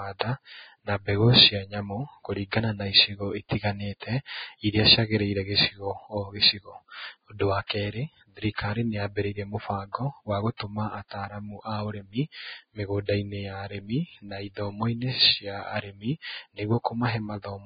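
Throughout the speech, the treble stops at 4.9 kHz and what remains sounds hissy and grainy. This is likely heavy Vorbis compression, at a rate around 16 kbps, which coarsely quantises the treble into noise rather than simply dulling it.

Pre-echo appears at 3.49 to 3.51 s after "nyamũ kũringana na icigo", at 7.67 to 7.70 s, at 8.55 to 8.58 s after "wa kerĩ", and at 10.57 to 10.60 s between "mũbango wa" and "ataramu aũrĩmi". Each time, a 20 to 31 ms smear of hiss leads into a sharp onset because the codec's block-wide noise spills ahead of the attack. Unlike a click or dropout, the noise comes before the sound rather than interrupting it.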